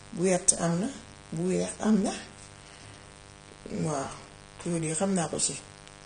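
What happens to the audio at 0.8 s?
At 0.8 s the speech carries a mains buzz, present throughout the clip at about 20 dB below the speech. Switching spikes from a dimmer, rectifier or missing shield enter twice per 50 Hz cycle, giving a steady, raspy buzz. A spectrogram shows evenly spaced horizontal lines at 50 Hz multiples reaching several kHz.

The speech at that moment also sounds plainly dull and smeared, with a warbling, fizzy texture on sibilants. The likely cause is AAC-LC compression at a low bitrate, around 32 kbps. A spectrogram shows nothing above 9.7 kHz.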